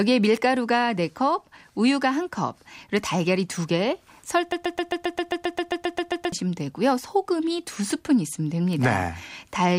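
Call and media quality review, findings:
Broken-record loop, 4.52–6.32 s: one 133 ms fragment replays 14 times, back to back and identical, with the underlying speech lost. Likely a stalled player or stream buffer. Unlike echo, the repeats neither decay nor overlap new audio.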